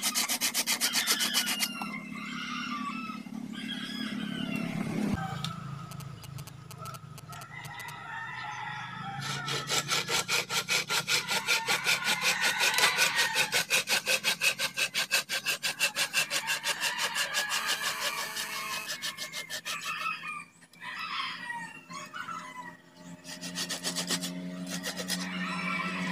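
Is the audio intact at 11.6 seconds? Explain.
Yes, at 11.6 seconds the audio is intact, with no dropout, click, distortion or other fault to be heard at that point.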